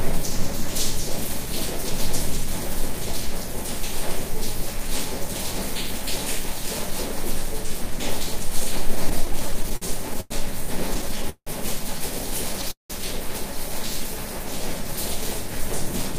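From 9.09 to 10.32 s the audio shows repeated stalls (stutter): twelve short breaks, the longest 99 ms, adding about 250 ms of filled sound, roughly a fifth of that stretch. Packets were reaching the receiver more slowly than they were played, so the jitter buffer kept running dry and the last sound was stretched to cover each wait. A second burst follows from 10.94 to 11.49 s, with six breaks totalling 220 ms, the longest 170 ms. Concealment fills about 41% of that span, so the drag is stronger there. Nothing is lost in either burst; the audio stumbles and falls behind.

At 12.71 to 12.92 s there is a call audio freeze lasting 186 ms. The last sound is held briefly and then fades, leaving about 140 ms of silence. Playback then resumes where it stopped, now 186 ms later than before. This is likely a single delivery hold-up that emptied the jitter buffer. The break adds a gap without removing any audio.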